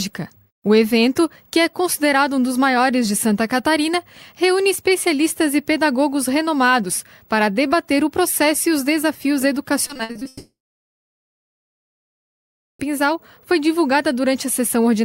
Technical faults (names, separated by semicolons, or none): repeated packet loss (robotic sound); long network dropout